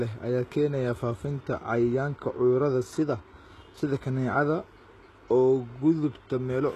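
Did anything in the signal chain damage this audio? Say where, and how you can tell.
Yes, at the codec stage, and the likely cause is HE-AAC compression at a very low bitrate, around 16 kbps. Throughout the speech, content stops near 12.3 kHz, and the replicated treble doesn't match the lower harmonics, so s sounds come out heavily gritty, metallic and lispy.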